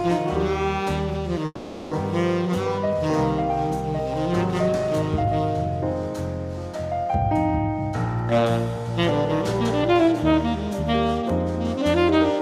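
At 1.45 s the sound stops moving forward and hangs until 1.94 s. This is a call audio freeze. The last sound is stretched into a fading buzz for about 460 ms, with a brief silence of 20 ms. When the sound resumes, it picks up exactly where it stopped, and nothing is lost. The likely cause is packets held up in transit, leaving the jitter buffer empty. The pause adds about 460 ms of delay.

From 9.84 s to 10.48 s the sound rushes. This is a jitter buffer speed-up. It plays at 120% speed, yet the pitch stays the same. The receiver had built up more audio than it wanted, so it cut out tiny pitch-period slices many times in a row. Roughly 150 ms is trimmed away. The result sounds hurried for that stretch, then settles back to normal pace.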